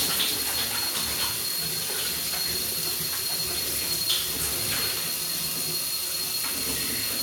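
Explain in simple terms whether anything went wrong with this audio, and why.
Nothing stood out as wrong when listening to these sounds; no glitch, dropout or odd change in the sound could be heard at any point.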